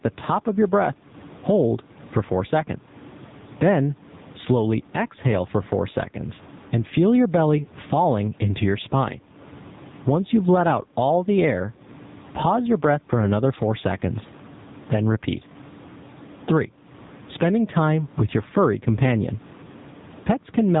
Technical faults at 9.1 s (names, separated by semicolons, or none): gain pumping; AMR narrowband mobile codec